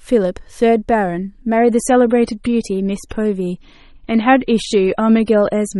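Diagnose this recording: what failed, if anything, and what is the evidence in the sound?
Network stage: an adaptive stream at a lower bitrate from 1.57 s to the end; the quality changes abruptly and artefacts rise without a gap, consistent with roughly 128 to 32 kbit/s MP3.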